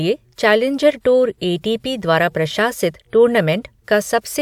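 Nothing in the speech stood out as a technical problem on listening.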